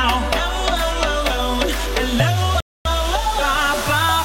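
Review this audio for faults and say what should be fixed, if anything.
At 2.60 s the sound drops abruptly into silence, then picks up again at 2.85 s exactly where it broke off, with nothing skipped. This is a rebuffering stall: playback consumed everything that had been downloaded and had to wait for more data before continuing, so about a quarter of a second (249 ms) of dead air is inserted. All the audio is still there, but it arrives late. To prevent it, buffer more audio ahead of playback or deliver it at a rate the connection can sustain.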